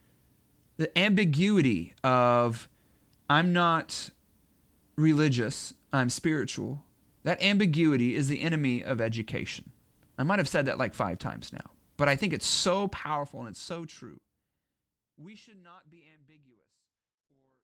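Nothing technically wrong can be heard in this speech recording. Near the end the level fades out smoothly, beginning at roughly 12 and a half seconds and easing away without any click or hard edge, the way an editor would finish it.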